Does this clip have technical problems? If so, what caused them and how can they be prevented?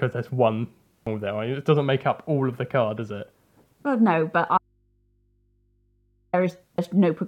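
Yes. At 1.07 s and again at 6.78 s the speech breaks, the mark of damaged data in a compressed stream: the decoder misreads corrupted frames and resyncs on the next header. Checksummed transport or error-resilient framing prevents it.

From 4.58 s to 6.33 s, about 1.75 s, the speech drops out abruptly to a faint residue of mains hum roughly 45 dB below the signal. That live hum distinguishes it from a pause or fade, and likely points to a lost connection ahead of a still-open input. Secure cabling and connectors, plus monitoring the feed, would prevent it.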